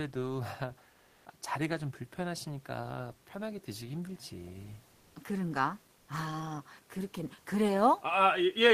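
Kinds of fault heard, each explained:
Comfort noise in place of the background: in three speech pauses (0.91, 4.91, 5.97 s) the real room background becomes steady, featureless noise at nearly the same level, likely from Opus DTX.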